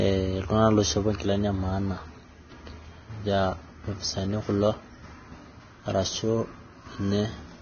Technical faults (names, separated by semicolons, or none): Vorbis compression